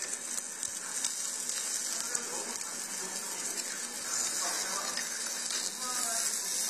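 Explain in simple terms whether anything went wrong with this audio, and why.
AAC compression damage runs through the whole clip. The sound is dull and smeared, with nothing above 14 kHz and a fizzy, warbling texture. It likely comes from saving at a low quality setting, which discards detail the encoder judges least noticeable.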